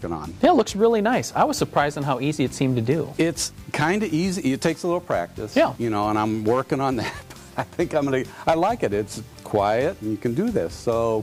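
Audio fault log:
0.79–11.23 s, low bit depth without dither: grainy distortion that tracks the sound, gritty on quiet parts and sputtering near silence, likely from coarse rounding that fits 8 bits. Error sits roughly 35 dB below the signal. The waveform shows visible stair-steps, and the spectrogram shows signal-shaped noise rather than an even floor.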